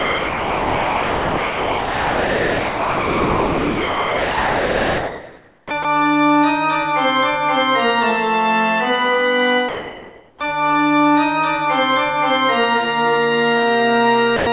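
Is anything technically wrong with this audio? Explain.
Yes. From the start to 5.71 s, at 5.83 s, and from 14.37 to 14.47 s, sound dropped by the voice detector is replaced by steady noise, likely because the detector judged real sound to be background. Unlike a plain dropout, the gap is filled rather than silent.

From 9.69 to 10.41 s, comfort noise in place of the background swaps the real background, about 23 dB below the loud parts, for featureless synthetic hiss at the same level. It is likely the result of discontinuous transmission, and it differs from a dropout because no wanted sound is lost.

At 10.39 s, just as that stretch ends, an onset clipped by the voice detector starts abruptly, likely because the detector reacted late and missed the first 20 ms, so the soft beginning is gone rather than muffled.

The call path's band limit, with nothing above 4 kHz, is consistent with G.711 at 64 kbps.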